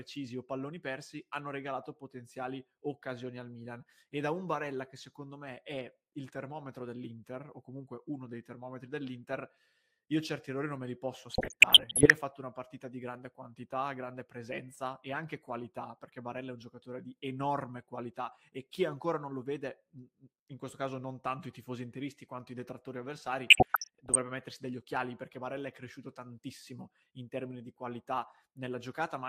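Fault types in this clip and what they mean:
DAB burbling: weak reception lets bit errors slip past error correction into the MP2 stream, so single sub-bands jump in level frame by frame, giving burbling blips at 11.3 to 12.1 s and 23.5 to 24.2 s.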